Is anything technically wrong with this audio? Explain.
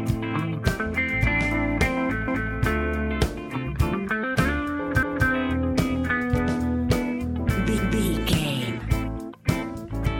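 Yes. Overlapping chunks cause a stutter at 2.28, 5.03 and 7.78 s. Each new 2.5 s chunk begins 250 ms before the previous one ended, so that quarter-second replays at every join. Unlike a dropout, nothing goes missing: sound repeats, at a steady 2.75 s spacing.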